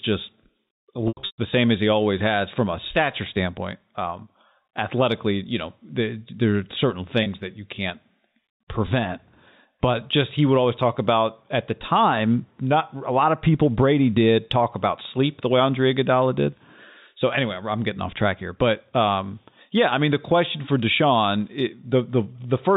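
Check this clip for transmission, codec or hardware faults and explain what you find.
The clip has packet loss with pitch repetition, in two places, heard through G.711 telephone coding with its usual 4 kHz ceiling.

From 1.08 to 1.38 s, just before "same as he always", about 240 ms of audio drops out in a scattered burst. The longest gap is 120 ms. The receiver fills each hole by repeating the last pitch period, then fading it. The short gaps sound like a buzzy, held tone. The longest one sags toward silence before the speech cross-fades back. From 7.23 to 7.26 s, between "the there are certain" and "that you can't", a single 30 ms loss gives a brief buzzy smear.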